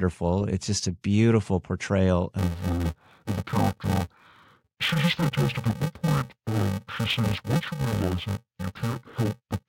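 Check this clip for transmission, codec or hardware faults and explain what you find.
One fault is present: interleaved audio read as planar. It starts at 2.39 s, right after "just a beautiful portrayal", and lasts to the end of the clip. Each short block of alternating left and right samples is split in half, with the first half sent to the left and the second to the right. Each half plays stretched, so the overall pace holds. The blocks are only about 2.9 ms long, which fits a 128-sample block. So the speech sounds dull and robotic. A buzz at about 345 Hz runs through it, with no clear octave drop.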